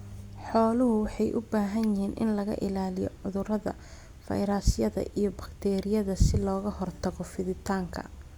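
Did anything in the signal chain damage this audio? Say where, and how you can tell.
No, nothing in the chain damaged this audio.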